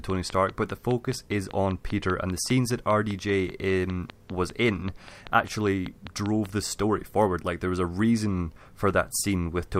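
From 0.1 s to 6.47 s a train of clicks runs under the speech at a steady five per second, around thirty in all, stopping just before "the story forward like". Each is a short, identical pop that peaks roughly 10 dB above the speech and keeps ticking through the pauses. The likely cause is interference from nearby equipment or a faulty connection or power supply. A waveform shows evenly spaced spikes, and a spectrogram shows matching thin vertical lines across all frequencies.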